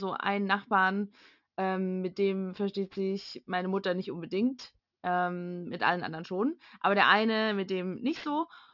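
Aliasing runs through the whole speech clip. It sounds like the rate was dropped to something like 12 kHz with no filter first, so content above 6 kHz folds back down as gritty, metallic sibilants, sitting roughly 30 dB under the voice and crowding the band edge.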